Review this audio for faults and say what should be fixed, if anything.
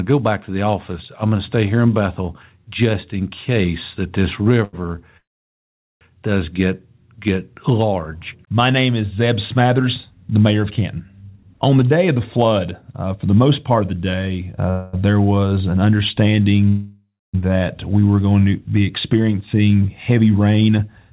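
A short stall from a late packet occurs between 4.64 and 4.87 s. The receiver ran out of audio and stretched the last sound by 89 ms until the packet arrived, then resumed from the same point with nothing lost. It is heard as a held sound with a slight buzz or dip. On a spectrogram it shows as a short smear of repeated harmonics; the waveform shows a brief run of near-identical periods. A deeper jitter buffer target would absorb this delay.

The call audio freezes three times, each likely caused by packets held up in transit. From 5.17 to 6.03 s the sound is continued for about 0.84 s, decaying into roughly 0.79 s of silence before "does get get large" resumes. From 14.70 to 14.95 s, just after "of the day uh", 0.23 s is filled with a fading buzz or hiss and never goes quiet. From 16.68 to 17.36 s, 0.65 s is filled, ending in 0.27 s of silence. The waveform shows decaying repeated cycles, then a flat line. 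The spectrogram shows smeared harmonics fading to a blank band. Steadier network routing or more buffer headroom would prevent these gaps.

The jitter buffer speed-up runs from 11.22 to 13.82 s at about 115 % speed, removing roughly 0.4 s. It runs again from 19.13 to 21.10 s, after "were going to be", at about 111 %, removing about 0.2 s. Pitch periods are cut out repeatedly, so the speech sounds hurried but keeps its pitch. The spectrogram shows compressed syllables with normal harmonic spacing, and the waveform shows shortened segments. Gentler buffer draining after bursts would avoid the rush.

The jitter buffer slow-down runs from 15.00 to 15.55 s at about 92 % speed, adding 52 ms. Single pitch periods are repeated, which draws sounds out. On the spectrogram the harmonics are stretched sideways. On the waveform, duplicated cycles appear. Keeping the buffer target stable instead of rebuilding it abruptly would prevent this.

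All of this sits within G.711 μ-law's band, with nothing above 4 kHz.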